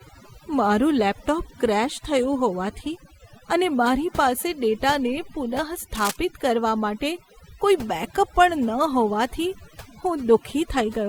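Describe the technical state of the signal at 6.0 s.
At 6.0 s there is cable scratch noise from 5.95 to 6.16 s, just before "કરવા માટે કોઈ બેકઅપ". It is a dense, uneven scratching burst around 10 dB below the speech, likely from a worn cable or connector changing contact resistance. Overdone noise removal also runs through this point. Aggressive spectral gating pulls bands near the noise estimate down, leaving a lowered, twinkling background.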